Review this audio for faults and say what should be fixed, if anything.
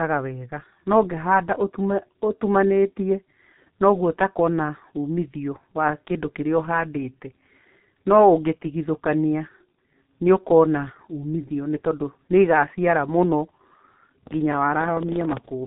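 The G.723.1 codec damage runs throughout. Nothing above about 3.9 kHz survives, and heavy coarse coding blurs consonants, which fits roughly 6 kbit/s. Route the speech through a wideband codec at a higher bitrate.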